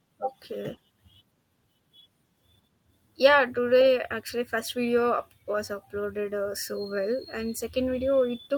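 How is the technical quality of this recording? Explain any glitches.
The recording has no technical glitches; the signal stays intact and continuous throughout, with nothing disrupting it at any point.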